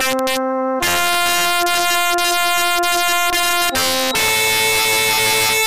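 Integer overflow runs throughout. The level is driven about 6 dB too hot, and peaks wrap to the opposite sign. The loudest moments, a small share of the audio, crack violently.

From 3.67 s to the end, a feedback whistle appears. A thin, single-pitch tone near 3.8 kHz that swells and fades slowly sits roughly 10 dB under the sound. It likely comes from a loudspeaker-to-microphone loop held just short of runaway.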